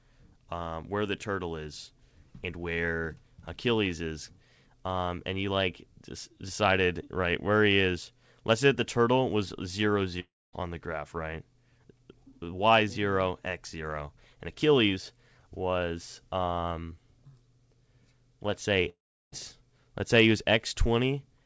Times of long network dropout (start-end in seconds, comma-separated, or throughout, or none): 10.20-10.55, 18.89-19.34